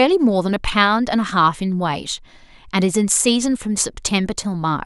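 No technical faults are audible.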